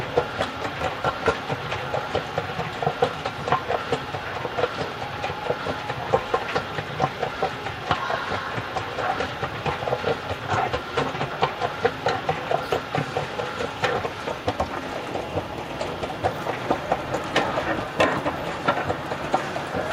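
The clip is a recording of sounds, and nothing is technically wrong with it.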